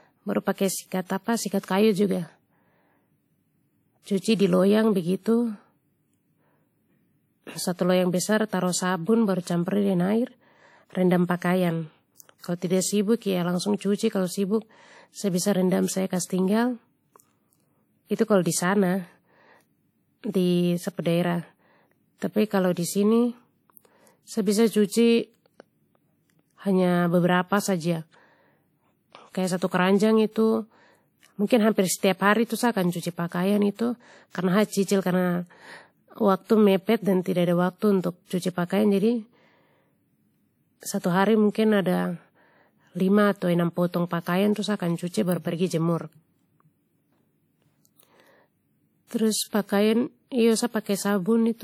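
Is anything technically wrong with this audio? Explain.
Yes. The speech has two kinds of fault. The whole clip likely passed through WMA compression at a low bitrate, which fits a stream of around 48 kbps. The encoder's long transform blocks let quantisation noise spread over tens of milliseconds, and weak spectral detail is discarded. The result is plainly audible throughout: a ringing, washy quality with a hiss that swells and fades along with the speech, even though content extends up to about 20.1 kHz.

Pre-echo occurs twice, at 4.20 s and at 40.99 s. Each time a sharp attack lands late in a transform block, and the noise sized for that loud onset also fills the quiet just before it. A short hiss, about 45 ms long, runs ahead of each attack, and the onset itself sounds softened and smeared rather than crisp.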